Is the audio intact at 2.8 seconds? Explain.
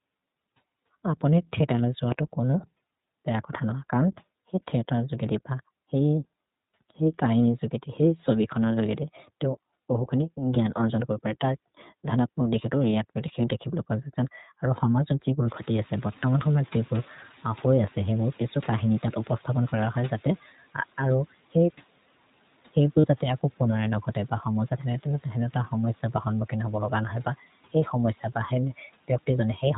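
No. At 2.8 seconds, as throughout the clip, the speech carries plainly audible iLBC codec damage. Each 20 ms frame's excitation is coded on its own, which gives the slightly rough, synthetic edge heard here; the frame length and coarseness fit the codec's 15.2 kbps mode. Nothing above 4 kHz survives, so a spectrogram shows a hard ceiling there, with grainy, smeared harmonics below rather than clean striations.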